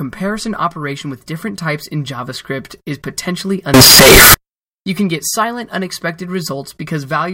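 From 3.74 to 4.34 s, just after "is potentially", the speech collapses into very loud, harsh distortion, and quiet moments in that span are as loud as everything else. This is most likely signed and unsigned mixed up in the 16-bit samples: the top bit is misread, so every zero crossing swings across the full range instead of passing through silence. The result is a wall of broadband noise for about 0.6 s.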